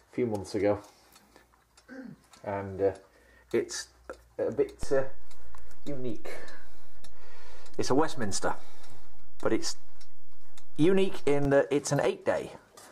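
A DC step arrives at 4.83 s and holds until 11.45 s. The waveform's zero line shifts suddenly, by about -23 dBFS, as if an offset voltage were switched into the signal path or a converter re-zeroed itself. That abrupt jump is heard as a low thump or click at 4.83 s. Between 4.83 s and 11.45 s, the sound itself carries on unchanged, riding on the displaced baseline.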